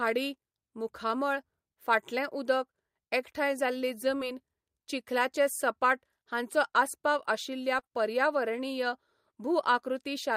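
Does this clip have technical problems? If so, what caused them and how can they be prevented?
Yes. Short concealed packet loss at 4.17 to 4.21 s, just after "एकठांय जाल्ली", and at 7.79 to 7.85 s. About 20 ms and 40 ms of audio arrived too late, so the receiver extrapolated the preceding speech, causing a brief smear. Prevention: use a larger jitter buffer, forward error correction, and a less congested network path.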